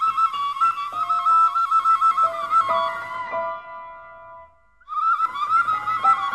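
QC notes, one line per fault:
0.27–6.28 s, clock slip clicks: faint, evenly spaced ticks about every 0.15 s, around forty in all. These are likely single samples dropped or repeated as two unsynchronised clocks drift apart, which fits a clock mismatch on the order of 100 ppm.
3.16–5.16 s, adaptive stream at a lower bitrate: the treble abruptly dulls, with nothing above 10.8 kHz and codec artefacts rising, then clarity returns without any gap. This points to the stream temporarily switching from roughly 96 to 32 kbit/s AAC after the connection slowed.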